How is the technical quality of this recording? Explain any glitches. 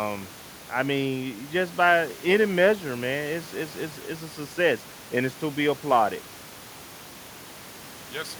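No glitches or technical faults can be heard here.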